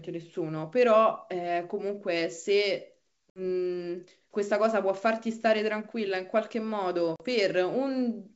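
At 3.30 to 3.39 s and again at 7.16 to 7.22 s the speech drops into abrupt silent holes, about 60 ms and 40 ms long, then returns with brief slight distortion. This is packet loss on an ADPCM call. A few packets vanished, and the decoder's adaptive predictor and step size lost track of the sender's until they resynchronised.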